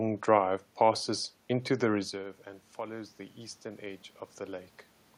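From 2.1 s to 4.77 s there is automatic gain rising. Around 2 s the talker moves back and the voice drops by about 16 dB at the microphone. The gain control reads this as a quiet input and slowly raises its gain by about 3 dB over more than two seconds. What separates this from the talker simply coming closer is that the room noise swells along with the voice, so the background is lifted too.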